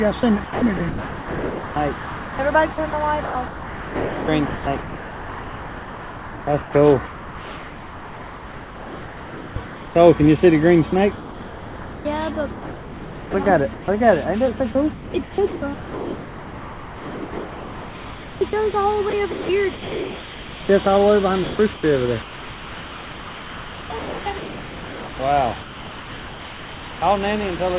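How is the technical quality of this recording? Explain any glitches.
The recording is badly broken up by a voice detector on the sending side. The audio itself comes through a narrowband call path with nothing above 4 kHz.

Sound chopped by the voice detector occurs from 0.2 to 9.95 s, 11.15 to 13.88 s, 14.57 to 20.69 s, and 21.44 to 27.02 s. A sender-side detector likely kept switching transmission on and off. Much of each stretch was replaced with synthetic comfort noise: about 7.35 s, 1.89 s, 4.47 s and 4.41 s respectively. The result is choppy.

Sound dropped by the voice detector occurs from 27.56 to 27.59 s. The detector likely mistook sound for background and stopped sending. Comfort noise fills a 30 ms gap before the sound returns.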